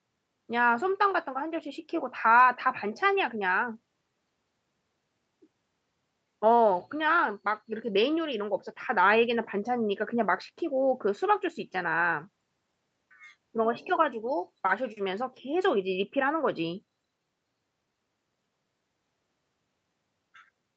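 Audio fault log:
No faults heard in this speech recording.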